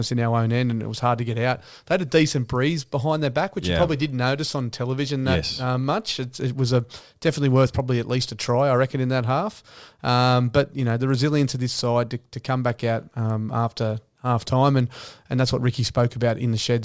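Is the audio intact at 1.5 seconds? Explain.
Yes, the speech at 1.5 seconds plays through intact, with no dropout, click, distortion or other fault audible at that moment.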